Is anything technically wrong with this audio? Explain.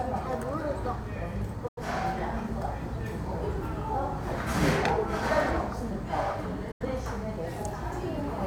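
Yes. There are two digital broadcast dropouts, from 1.68 to 1.82 s and from 6.71 to 6.86 s. In each, the receiver stopped getting decodable frames and muted its output until valid data returned. The sound fades to silence in about 8 ms, stays silent, and then resumes further along. About 85 ms of material is missing each time, which fits two lost frames of roughly 43 ms each.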